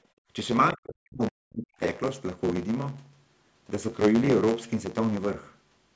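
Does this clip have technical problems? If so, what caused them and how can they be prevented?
Yes. There are three faults.

A block size mismatch (truncated) runs through the whole clip. A buzz sits steadily at 109 Hz. The speech also moves about 1.09 times too fast, yet its pitch stays near normal. One stage hands over blocks that are longer than the next stage takes in. The leftover end of each block is dropped, so time skips forward at every block boundary. Those regular cuts make the buzz. Prevention: configure every stage in the chain to use the same block size.

Between 0.11 and 0.28 s, the background is gated by the echo canceller. The room sound drops by about 25 dB at its deepest. Roughly 150 ms is affected in all. The canceller treated the loudspeaker signal as a threat and pulled the microphone down hard. The room tone returns once it releases. Prevention: use gentler suppression, and fill the gaps with comfort noise so the background stays continuous.

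From 0.73 to 1.8 s, the speech itself dips sharply. The deepest drop is around 40 dB. About a second is affected in total. This is likely speech suppressed in double talk. Both sides were talking, and the canceller could not separate the local talker from the echo, so it turned everything down. Prevention: improve the double-talk detection so the canceller keeps the near-end voice open.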